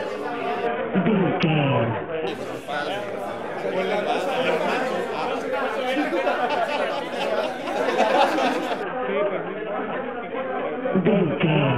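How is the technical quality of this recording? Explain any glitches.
Quality drops twice. From 0.67 to 2.27 s, and again from 8.83 s to the end, the treble goes dull and a gritty, grainy noise rises under the sound; after the first drop, clarity returns. This is a Bluetooth SBC bit pool drop: the link was squeezed, so the encoder cut its bit pool sharply, which fits a fall from about 31 to 5, near 50 kbps. The top sub-bands get almost no bits and the rest are quantised coarsely.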